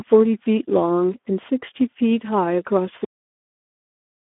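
From the start, the speech carries Speex codec damage. The sound is narrow, from roughly 250 Hz to 3.5 kHz, with nothing above 3.8 kHz. Too few bits go to the excitation, which fits about 11 kbps. Speech sounds noisy and hoarse.

At 3.04 s comes a cut-off end. The final buffers were never played. The speech stops mid-sound and drops straight to digital silence. There is no decay. The silence runs to the end of the clip.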